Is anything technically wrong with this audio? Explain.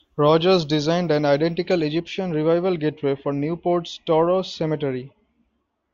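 Yes. From 0 to 2.0 s the speech sounds thin, bright and hissy, with exaggerated sibilance. This is pre-emphasis left on: the 75 µs FM treble boost, about 13 dB at 10 kHz relative to 1 kHz, was applied but the matching de-emphasis never undid it.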